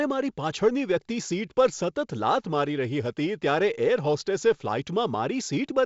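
Nothing stood out on listening to this speech, which comes through G.722 wideband telephone coding at 56 kbit/s with no content above 7.7 kHz.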